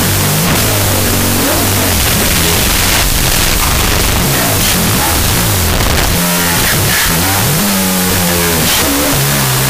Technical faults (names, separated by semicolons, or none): wrong sample width